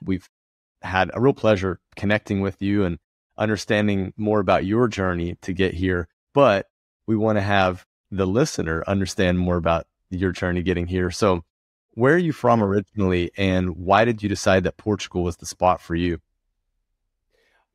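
The speech signal carries no technical faults; the background falls silent in the pauses and comes back in time for each next phrase, with nothing of the speech cut.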